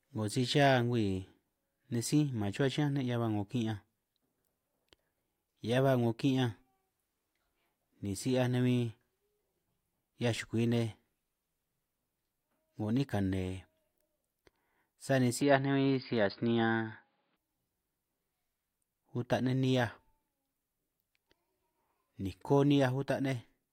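From 15.41 to 17.37 s the speech turns dull above 4.9 kHz and gains a faint new noise floor, at unchanged level and without a gap, likely an input switched to a poorer device.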